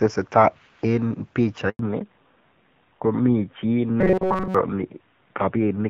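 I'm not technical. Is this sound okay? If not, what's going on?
No. At 1.69 s there is a handover gap. The call switched networks, and the speech cuts out completely for about a tenth of a second, until 1.79 s.

Right after, at 1.79 s, comes a fallback to narrowband. The call drops out of HD Voice. Everything above 4 kHz disappears, so the voice sounds duller and rougher until the end.

From 4.01 to 4.55 s the voice turns into a stiff, metallic buzz at about 188 Hz. This is robotic sound, likely from repeated short buffers. Most of that stretch is tiny slices replayed instead of new audio.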